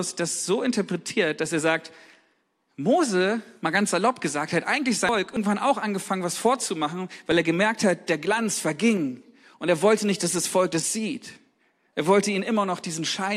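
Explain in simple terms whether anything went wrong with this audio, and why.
Around 5.09 to 5.37 s, right after "salopp gesagt hat eigentlich", the speech jumps ahead by about 0.4 seconds to "auch angefangen was vorzumachen". Those are compressed frames skipped: chunks of the file never got played.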